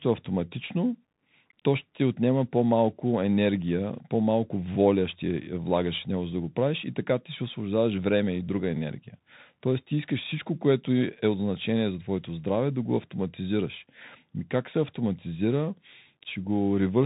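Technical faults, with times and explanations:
Throughout, Bluetooth CVSD headset codec: the speech sounds narrow and boxed-in, with nothing above 4 kHz, a granular hiss beneath it, scratchy s sounds and distortion on loud bright moments. Each sample is coded as one up-or-down bit at a 64 kbps rate, and the adaptive step can't keep pace.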